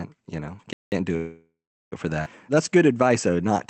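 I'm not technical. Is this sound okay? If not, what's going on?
No. Four separate problems can be heard in this speech clip.

Playback stall, from 0.73 to 0.92 s. The speech simply stops for about a fifth of a second and then carries on from the same spot. Most likely the player briefly ran out of audio to play, or was held up doing something else, so it produced silence until it caught up. Nothing is lost, but the flow of speaking is visibly interrupted.

Call audio freeze, from 1.16 to 1.94 s. For about three quarters of a second the last bit of sound is stretched out into a fading buzz, and for roughly 0.39 s of that it falls silent. Likely cause: pieces of the call's audio were delayed in transit, so the receiving end had nothing new to play and padded the gap. When the delayed audio arrived, speech resumed exactly where it paused, with nothing missing.

Skip ahead, at about 2.24 to 2.28 s. 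Here the audio jumps forward almost seamlessly, dropping around half a second of speech. Audio that arrived later was already waiting, so the receiver threw away a stretch to catch up, stitching the two sides together with only a tiny join. You hear part of what was said vanish abruptly.

Jitter buffer slow-down, from 2.54 s to the end. The speech plays at about 92% of normal speed while keeping its normal pitch, so it sounds slightly drawn out and can warble faintly. The receiver was low on spare audio and rebuilt its reserve by repeating tiny slices of sound many times over, stretching the speech out.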